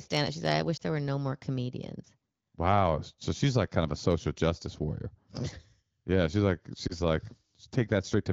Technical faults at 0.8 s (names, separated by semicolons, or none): lost AMR speech frames